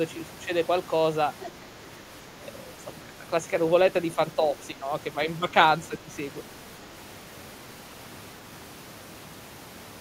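From 1.41 to 1.5 s, a faint second voice sits under the speech. It is the other side's voice leaking through. It is roughly 15 dB below the talker, so it is quiet. The likely cause is the talker's loudspeaker reaching the microphone. The echo canceller did not strip all of it out. The scrap is brief.

From 3.0 to 3.18 s, the talker's speech sinks. It drops by as much as around 10 dB, over about 150 ms of that span. The same thing happens from 4.73 to 4.85 s, more gently, by around 5 dB. This is speech suppressed in double talk. The likely cause is both sides speaking at once. The echo canceller could not tell its own talker from the returning echo. So it turned everything down.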